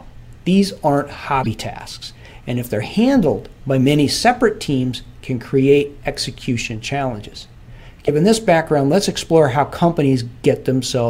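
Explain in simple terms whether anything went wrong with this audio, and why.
Two brief glitches occur, at 1.43 to 1.47 s and 8.06 to 8.09 s: the sound jumps ahead with a chirp, a burst of noise or a short gap. The likely cause is a broken MP3 bit reservoir, where missing frames leave the next ones reading borrowed data. A plain dropout would give clean silence.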